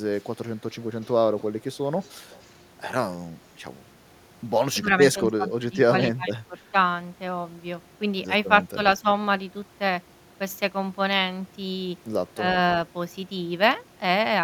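A faint, delayed copy of the speech trails behind it at 0.15 to 0.3 s, 1.01 to 1.13 s and 2.0 to 2.56 s, lagging by 299 ms and sitting roughly 30 to 35 dB below the direct sound. This is an echo leak, likely from a far end playing the call over a loudspeaker whose echo canceller let part of the microphone pickup slip through and sent it back.

From 4.76 to 4.92 s, 5.15 to 5.81 s and 6.16 to 6.55 s the speech sinks and breaks up in patches, dipping by about 10, 15 and then 20 dB. This is speech suppressed in double talk. The echo canceller was likely confronted with both sides talking at once and, unable to tell the local talker from loudspeaker echo, turned the whole signal down.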